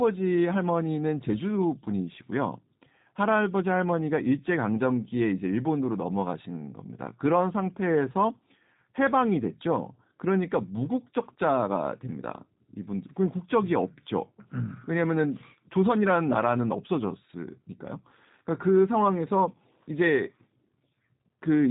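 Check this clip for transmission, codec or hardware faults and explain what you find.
One codec fault runs through the whole clip. Throughout, the speech has passed through the G.729 codec, at a rate that fits 8 kbit/s. The codec models each 10 ms frame with a vocal tract filter, a pitch predictor and a few pulses, and discards everything above about 3.8 kHz. The result is plainly audible: muffled, slightly rough, synthetic speech.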